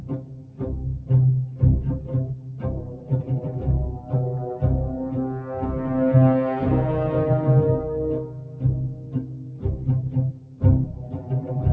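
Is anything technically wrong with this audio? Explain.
Yes. A noise suppressor built for speech was applied to music or sounds throughout. It treats steady, sustained material as noise and pulls it down, so the level swings by roughly 10 dB, with held parts sinking and tails thinning while attacks pass through.

Sound cut by the noise suppressor occurs at 0.0–0.6 s, 2.34–2.64 s, 8.23–8.63 s, 8.89–9.87 s and 10.32–10.62 s. In these stretches the suppressor judged the material to be noise and cut it by up to about 6 dB, so it audibly dips and its decay is clipped short. All of this sits on a call path whose band stops near 8 kHz.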